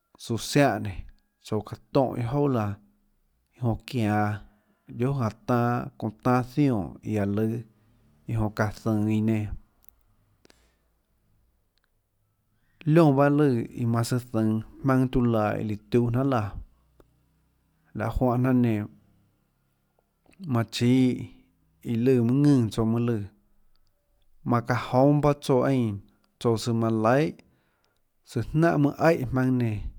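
A speech recording with no technical faults to report. Nothing in it calls for a timestamp or a cause.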